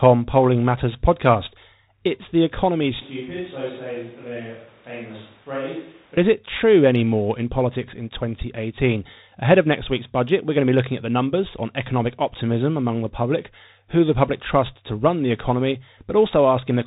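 The whole clip runs through a Bluetooth CVSD headset codec, which fits a 64 kbps link: nothing above 4 kHz, scratchy s sounds, plus granular hiss underneath. Right after "the economy", from 3.02 to 6.17 s, there's an abrupt switch to a distant microphone, likely after the close mic dropped. It goes roomy and hollow, with thinner bass, about 10 dB quieter, and more room noise, then snaps back at "is it true anymore".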